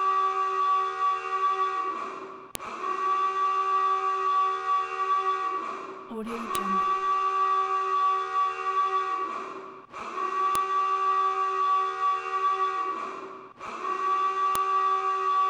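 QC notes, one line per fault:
2.55, 6.55, 10.55 and 14.55 s: file header played as audio, a sharp loud snap every 4 s as each joined piece's unstripped header bytes play as samples.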